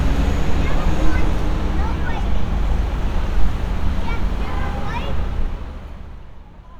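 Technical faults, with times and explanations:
5.12 to 6.4 s, zipper noise: the level falls by roughly 15 dB in audible steps of about 1 dB, around ten per second, instead of gliding down. Each unsmoothed jump puts a small click into the waveform, so a steady ticking rides on the sound only while the level is moving. That ties it to the gain change, unlike random clicks.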